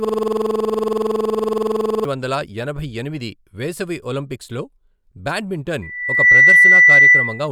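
A speech recording that opens mid-stutter: from the very start until 2.05 s, one 46.44 ms fragment repeats 43 times in a row, giving a rapid machine-gun rattle at 21.5 Hz instead of moving sound. This is a system hang loop. The computer or its audio driver stalled, and the sound hardware kept replaying the same ring buffer. A loop that length fits a 2048-sample buffer, and the fault was already in progress when the clip began. Later, at 5.82 s, a pure tone near 2 kHz appears and swells over roughly half a second into a piercing squeal. It sits something like 15 dB above the speech until it stops at 7.48 s. This is loudspeaker feedback squeal. The microphone was picking up the loudspeaker it fed, and at around 2 kHz the loop gain went above one, so that frequency kept reinforcing itself.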